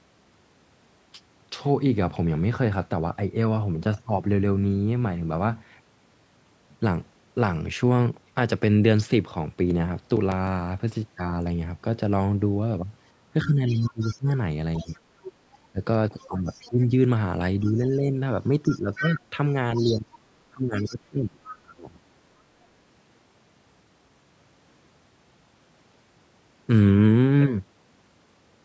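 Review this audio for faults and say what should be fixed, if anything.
CD scratch ticks run from 9.40 to 10.78 s: ten short clicks, the longest only a few milliseconds, repeating at roughly seven per second. That steady rate matches one damaged spot passing the laser on every turn of the disc, each pass losing more data than error correction could rebuild, so the player patched or muted those samples. On a waveform they show as tiny spikes or gaps; on a spectrogram, thin vertical lines evenly spaced across all frequencies. Cleaning or re-ripping the disc with a secure, multi-pass ripper would prevent this.

Speech suppressed in double talk affects 13.44 to 21.93 s, where the talker's level dips repeatedly, by as much as around 20 dB, for about four seconds in all. The likely cause is an echo canceller that, with both sides talking, could not tell the talker from the loudspeaker echo and pulled everything down. 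The waveform envelope shows sudden hollows mid-phrase, and the spectrogram shows the voice's harmonics fading or breaking up, often losing the upper bands first. A headset instead of an open loudspeaker, or a better-tuned echo canceller, would avoid it.

The other side's voice leaking through appears from 13.68 to 16.71 s at about 20 dB below the talker, as a brief scrap from 17.65 to 17.72 s at about 30 dB below, and from 18.68 to 21.54 s at about 10 dB below. This is likely loudspeaker playback picked up by the microphone and only partly cancelled. On a spectrogram a second, fainter harmonic pattern runs under or between the talker's, not aligned with it. The top of the band stops near 8 kHz, which is normal for the call's microphone processing. Using headphones, or keeping the echo canceller's reference path intact and correctly timed, would prevent the leak.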